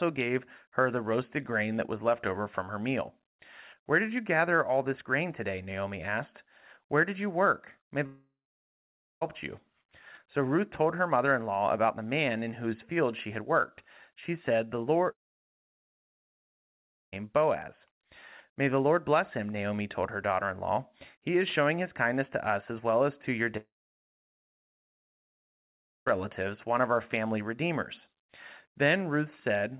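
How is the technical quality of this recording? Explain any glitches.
The recording has three gaps where the sound drops out, heard over narrowband call audio with nothing above 4 kHz, which fits a G.711 telephone codec.

Long network dropouts occur at 8.06 to 9.23 s, 15.11 to 17.14 s, and 23.57 to 26.19 s, the last falling between "well as to your" and "one of our family." Packets likely stopped arriving, so the receiver briefly extended the last sound into a fading buzz, then fell silent until audio resumed with that stretch missing.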